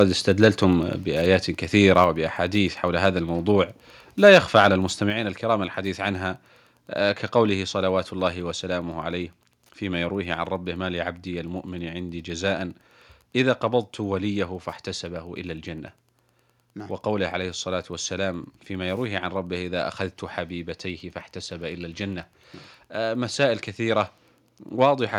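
Throughout the speech there is a faint, steady ticking about ten times a second, roughly 45 dB below the voice. This is Wi-Fi interference: a nearby radio's beacon, repeating every 102.4 ms, is being rectified by the audio circuit.

Harsh, crackling edges appear on loud peaks at 0.00–0.02 s, 0.43–0.47 s, 1.97–2.04 s and 4.26–4.67 s, overshooting by about 2 to 3 dB. The likely cause is microphone overload, with the peak tops flattened at the converter's limit.

At 2.04 s, right after a distorted peak, the voice and background drop suddenly by about 3 dB, and at 5.10 s they drop by about 4 dB. Each drop is consistent with the microphone volume being stepped down in a single move.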